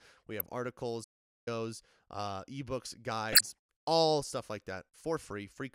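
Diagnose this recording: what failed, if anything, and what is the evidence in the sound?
Codec stage, corrupt frame decoded: brief squeaky bursts at 0.40–0.47 s and 3.32–3.41 s, a few damaged frames each, show as misplaced vertical energy smears on a spectrogram.

Playback stage, playback stall: the speech stops dead from 1.03 to 1.48 s, a flat waveform gap of about 0.43 s, likely from the player starving for data before resuming.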